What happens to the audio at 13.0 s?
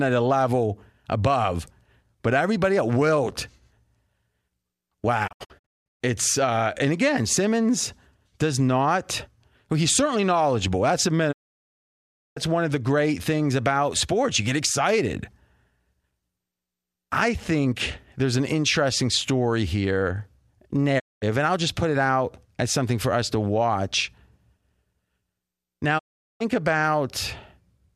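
Nothing goes wrong at 13.0 s: the speech carries on cleanly through that moment with no dropout, click, distortion or other fault.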